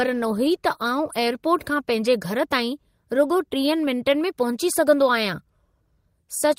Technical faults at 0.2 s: none

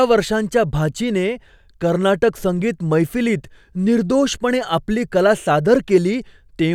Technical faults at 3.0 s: block size mismatch (truncated)

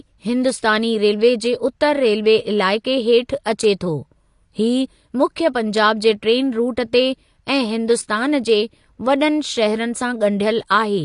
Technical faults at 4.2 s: AAC compression

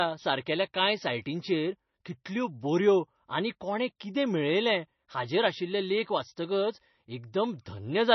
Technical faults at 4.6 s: MP3 compression

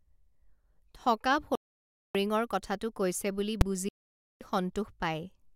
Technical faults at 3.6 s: invalid numbers at full scale

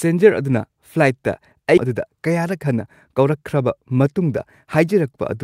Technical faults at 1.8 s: skip ahead; jitter buffer speed-up

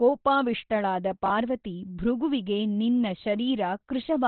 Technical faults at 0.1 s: Opus compression

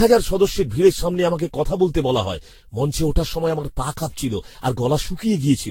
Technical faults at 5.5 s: generation loss

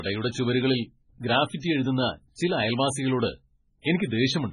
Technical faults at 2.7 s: MP3 compression

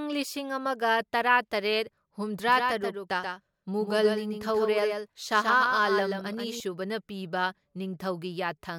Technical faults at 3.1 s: doubled audio track

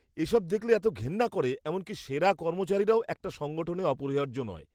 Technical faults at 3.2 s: none

